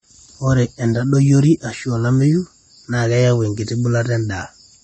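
Speech throughout carries plainly audible AAC compression damage: nothing reaches above about 8.4 kHz, leaving it dull and smeared, with a fizzy, warbling edge on sibilants and sustained sounds. The sound points to a low-bitrate encode, likely AAC-LC at around 32 kbps.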